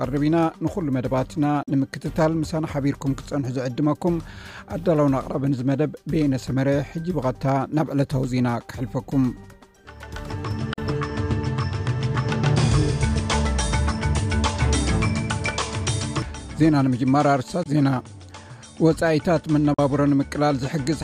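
Short silent gaps cut the sound at 1.63 to 1.68 s, 10.73 to 10.78 s, 17.63 to 17.66 s and 19.74 to 19.79 s, likely a Bluetooth dropout. Each gap is about 40 ms, or 20 ms at 17.63 s, which fits one or two lost packets. The sound resumes further along, as if it had kept playing. Each shows as a flat-line hole in the waveform and a clean vertical blank stripe across the spectrogram.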